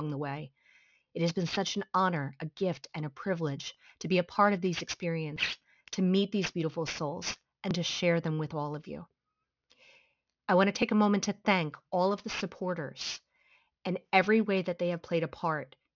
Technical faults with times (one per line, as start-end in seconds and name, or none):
0.00-15.96 aliasing